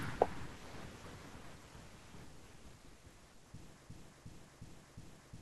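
Broken-record loop from 3.84 s to the end: a 0.36 s speech fragment repeats exactly four times, likely a stalled player resending its last chunk.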